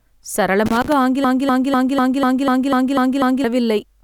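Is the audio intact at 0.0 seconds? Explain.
Yes, the audio is intact at 0.0 seconds, with no fault audible at that moment.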